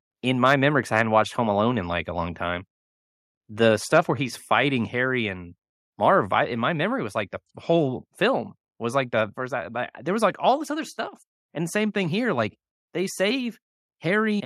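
From 0.46 to 0.54 s, just before "memory because I", a loud syllable turns harsh and crackly. This is microphone overload. The input volume is likely set too high, so the peaks run about 3 dB past the converter's ceiling and their tops are sheared flat. A smaller burst follows from 0.96 to 1.0 s, about 2 dB over. At 1.02 s, right after "memory because I", the microphone volume is stepped down. The speech and the background drop together by about 1 dB. This is likely the call software reacting to the clipping by lowering the input in one step. From 3.94 to 3.99 s the crackle returns, again about 2 dB over the limit. At 4.11 s, just before "he's fighting", a second step down follows. This one is bigger, about 3 dB, so the sudden loss of level is easier to hear.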